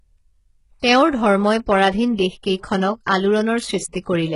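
HE-AAC compression damage runs through the whole of this speech recording, heavy enough to be heard from start to finish. Nothing remains above about 11.1 kHz, and the treble that is present has the synthetic, copied-up quality of spectral band replication: upper bands rebuilt from lower ones under a coarse envelope, so harmonics fail to line up across the crossover and sibilants turn gritty and metallic. The likely cause is HE-AAC coding at a very low rate, which fits a bitrate around 12 kbps.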